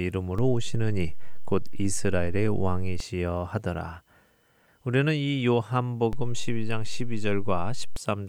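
A DC step shifts the waveform's zero line by about -24 dBFS from 0.39 s to 3.00 s, then by about -23 dBFS from 6.13 s to 7.96 s. Each jump gives a low thump while the speech continues intact, unlike a dropout click, which interrupts it.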